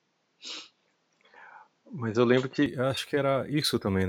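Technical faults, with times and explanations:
0.00–2.66 s, input switched to a poorer device: the speech has nothing above 7.6 kHz and sits a few decibels off its later level, with a faint noise floor, until it clears with no gap, likely because recording began on a narrower-band microphone before switching.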